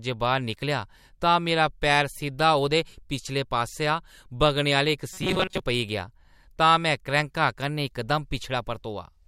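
From 5.13 to 5.60 s, just before "पेई गेआ तां में", the speech turns into a rigid, metallic buzz at 188 Hz. It still roughly tracks the syllables. This is robotic sound from repeated short buffers. The likely cause is audio arriving too seldom, so a slice of about 5.3 ms was looped to fill the gaps. Most of this stretch is repetition, and the real speech there is skipped.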